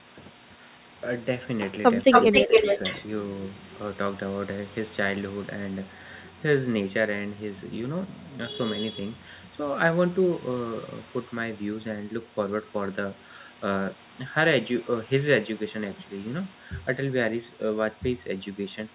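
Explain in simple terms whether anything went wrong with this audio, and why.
Something did go wrong, in a short stretch near the start.

From 2.11 to 3.04 s, a second copy of the speech arrives about 0.27 s late, nearly as loud as the original. This is an echo leak. One side was likely on a loudspeaker, and its echo canceller failed to remove all of what its microphone picked up. That sound was sent straight back, so the listener hears a delayed repeat.

The same region also shows speech suppressed in double talk. At 2.07 s the speech drops sharply for a brief moment. From 2.32 to 2.64 s it dips again, more gently. When both sides sound at once, the echo canceller likely can't tell the real talker from the echo. So it turns everything down, and the speech briefly fades.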